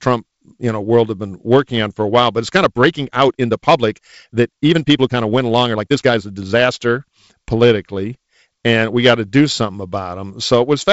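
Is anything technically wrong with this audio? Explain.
Yes. From 2.52 s to 6.74 s the speech abruptly runs about 1.4 times faster while its pitch stays where it was, so the passage sounds rushed against the pace on either side. The likely cause is a time-stretched section: software compressed that stretch to fit a shorter length, holding pitch by discarding short slices of the waveform rather than simply playing it back faster. The G.722 wideband telephone coding can be heard as a bandwidth limit near 7 kHz and light coding noise consistent with its 48 kbit/s mode.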